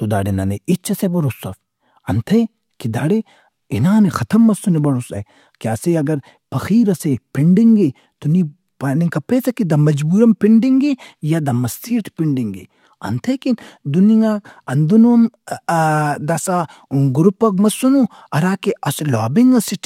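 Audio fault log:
No audible faults detected.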